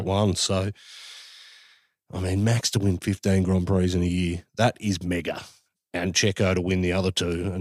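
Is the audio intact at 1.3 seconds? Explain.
Yes, the audio is intact at 1.3 seconds, with no fault audible at that moment.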